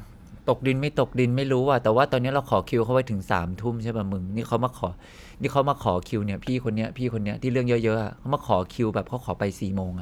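Listening to the speech recording, nothing stood out as a technical problem at any point.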